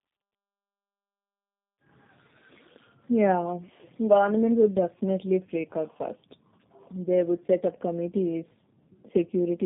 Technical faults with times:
0.00-9.66 tandem speech coding

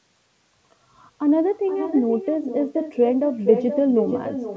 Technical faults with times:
0.00-4.57 echo with no canceller

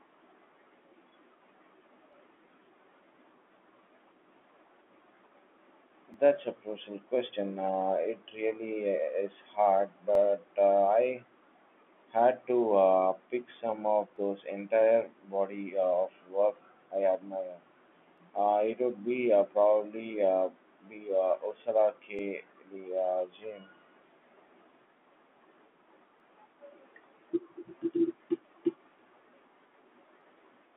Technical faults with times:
2.13 overlapping chunks
6.14 overlapping chunks
10.15 overlapping chunks
14.16 overlapping chunks
18.18 overlapping chunks
22.19 overlapping chunks
26.20 overlapping chunks
30.21 overlapping chunks

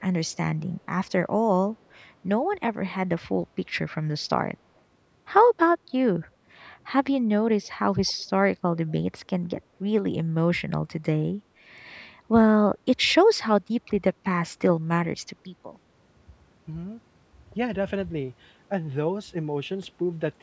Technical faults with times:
8.06-8.24 echo leak
8.88-8.92 echo leak

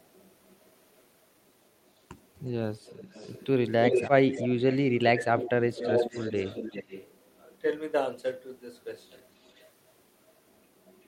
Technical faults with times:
0.00-1.07 echo leak
2.88-4.78 echo leak
4.87-5.83 speech suppressed in double talk
5.37-7.40 echo leak
8.99-11.07 echo leak

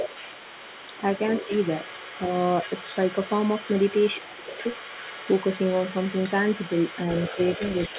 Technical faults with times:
0.00-7.98 other side's voice leaking through
1.47-1.52 speech suppressed in double talk
4.20-4.63 speech suppressed in double talk

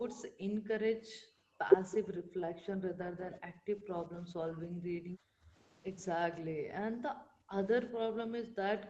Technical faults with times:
0.15-1.60 background gated by the echo canceller
2.03-3.90 background gated by the echo canceller
3.17-3.23 lost packet rebuilt from error correction
4.26-5.54 background gated by the echo canceller
6.91-7.53 background gated by the echo canceller
7.97-8.89 background gated by the echo canceller

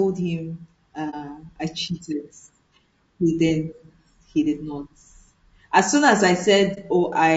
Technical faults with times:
0.00-7.37 low-delay AAC compression
1.10-1.15 AAC frame loss with muting
6.74-6.79 AAC frame loss with muting

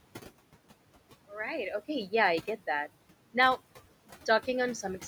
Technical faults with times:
0.00-5.07 noise suppressor artifacts

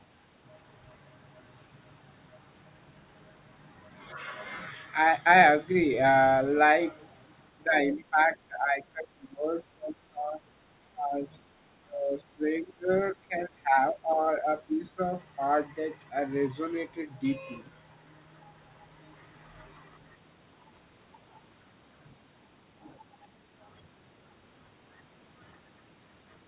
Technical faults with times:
7.65-8.19 speech suppressed in double talk
8.48-10.39 speech suppressed in double talk
10.94-11.54 speech suppressed in double talk
11.85-14.99 speech suppressed in double talk

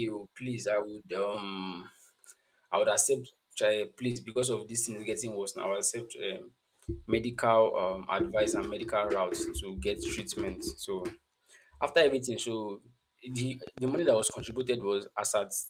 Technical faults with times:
4.11-4.38 short concealed packet loss
13.67-14.62 train of clicks

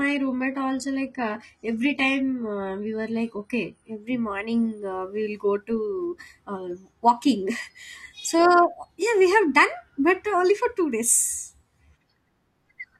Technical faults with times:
0.00-4.00 adaptive stream starting at a low bitrate

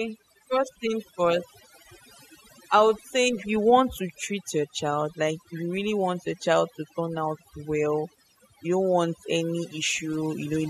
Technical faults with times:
0.00-10.69 overdone noise removal

